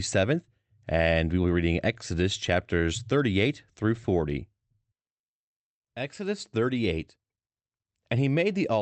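No technical faults can be heard in the speech, which carries the mild character of a call link, with the top end stopping at about 8 kHz in a way that fits an Opus connection at a moderate bitrate.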